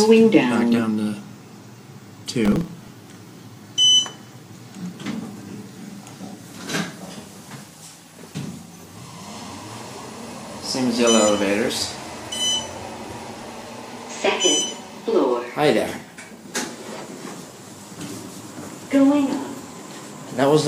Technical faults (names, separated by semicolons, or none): processor overload crackle